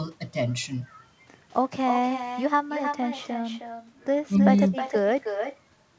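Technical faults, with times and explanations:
Throughout, echo with no canceller: every phrase returns roughly a third of a second later, about 7 dB quieter and thinner. The far end's loudspeaker feeds its microphone uncorrected.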